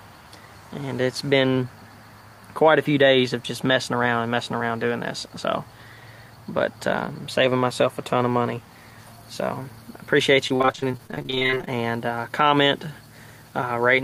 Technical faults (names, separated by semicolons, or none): repeated packet loss (robotic sound)